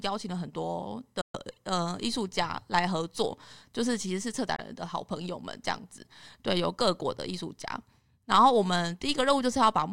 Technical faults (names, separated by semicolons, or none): Bluetooth dropout